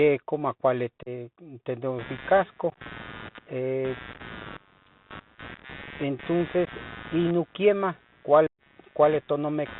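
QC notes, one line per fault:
Throughout: Bluetooth CVSD headset codec. The speech is plainly squeezed into a narrow phone band, with nothing above 4 kHz. The one-bit delta modulation runs at 64 kHz, and its adaptive step cannot keep up with loud, bright moments, so sibilants turn scratchy and a granular hiss sits under everything. On a spectrogram there is a hard ceiling at 4 kHz with a speckled noise floor below it. On the waveform, steep transients show up as slope-limited, staircase-like ramps.
1.03–1.08 s, 2.70–2.78 s, 4.13–4.21 s, 5.55–5.65 s, 6.65–6.69 s, 8.47–8.63 s: unconcealed Bluetooth headset packet loss. Short voice packets between headset and phone were dropped, and nothing was patched in to cover the gaps. At 1.03 s about 34 ms is missing in one block. At 2.70, 4.13 and 5.55 s the losses break up into scattered runs, the longest about 19, 15 and 7.5 ms, so the sound comes through chopped and crackly. 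At 6.65 s the gap is a brief 15 ms. The worst is at 8.47 s, a solid hole of about 120 ms. Each hole has abrupt edges that can click, and the speech resumes quieter for a moment as the codec's step recovers. On the waveform these are flat or near-flat gaps with sharp boundaries. On a spectrogram they appear as thin vertical blank stripes.
1.99 s to the end: computer activity noise. From about 2 s onward a buzzy pulse train sits roughly 20 dB below the speech, with a rate near 100 Hz. It comes from processor or peripheral load disturbing the audio ground, so it follows the machine's activity rather than the speech. A spectrogram shows evenly spaced harmonic lines or a comb pattern that continues through pauses. The waveform shows a fine periodic ripple riding on the quiet stretches.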